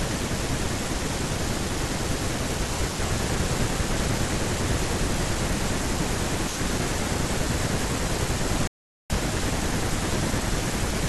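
At 8.67 s a rebuffering stall halts the speech for 0.43 s, then resumes exactly where it stopped; waveform and spectrogram show a flat, empty gap through 9.10 s.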